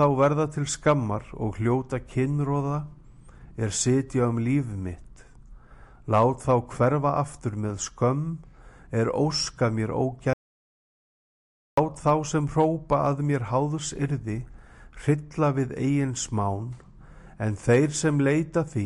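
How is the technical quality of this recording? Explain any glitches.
The recording has one clear glitch, an audio dropout to silence. From 10.33 to 11.77 s the sound cuts off abruptly into dead silence with no room tone, then resumes mid-flow about 1.44 s later. The likely cause is a brief loss of the input signal, such as a disconnected device or a momentary mute, while the recorder kept writing silence, so whatever sounded during that stretch is lost.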